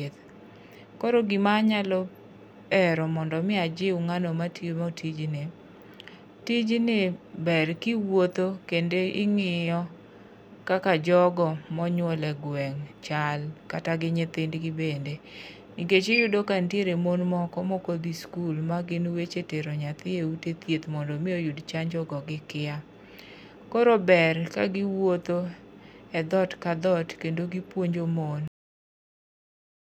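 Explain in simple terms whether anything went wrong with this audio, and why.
Yes, something went wrong at the very end. The speech has a cut-off end at 28.48 s. The sound stops abruptly in mid-speech, with no natural fade. Pure silence follows for the last 1.4 s. The final stretch of audio was never recorded or played out.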